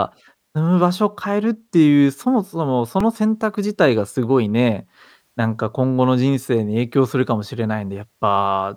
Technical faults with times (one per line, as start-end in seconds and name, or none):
3.00 repeated buffer